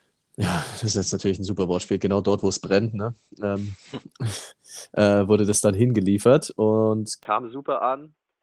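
Right after "ja das", at 0.89 s, there's a call bitrate drop. The encoder goes from 32 kbps down to 14 kbps, with the lowest stretch lasting about 2.5 s. At that rate it trims the band from 20 kHz to 8 kHz, so the speech loses its air and takes on a rough, watery coding texture. It recovers at 5.45 s, just before "das dann hingeliefert und".

Then at 7.23 s, after "das dann hingeliefert und", the sound turns dull and boxy through to the end, most likely because the input switched to a poorer device. There's a 20 ms gap at the switch. After it, nothing gets through above 3.8 kHz, the level falls by roughly 10 dB, and a new faint noise floor sits well below the speech.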